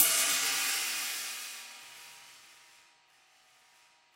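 From 1.82 s until the end, the sound takes on a hard, robotic rattle, a steady buzz at 100 Hz that rides on top of whatever is playing and drops away whenever the signal itself goes quiet. This is buffer tearing. The program filling the ring buffer and the hardware draining it have drifted out of step and now cross inside each 10 ms period. Roughly half of every buffer replays audio from a lap earlier, about 40 ms old, spliced in with abrupt joins at both edges.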